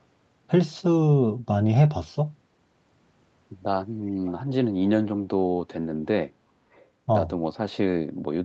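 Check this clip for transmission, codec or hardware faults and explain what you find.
There is one fault here, an echo leak, heard twice: at 4.25 to 4.32 s and at 6.72 to 6.84 s. Each time a brief, faint copy of the speech returns about 363 ms late, the first well below the voice and the second fainter still. The likely cause is a far end playing the call on a loudspeaker, where the echo canceller let some of the microphone pickup through and sent it back. Unlike room reverberation, which smears into a continuous tail, this is a distinct, delayed scrap at a fixed lag.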